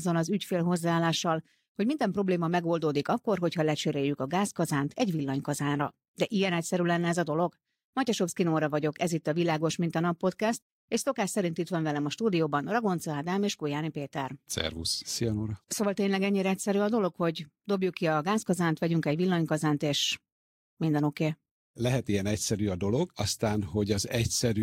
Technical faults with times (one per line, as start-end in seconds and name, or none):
none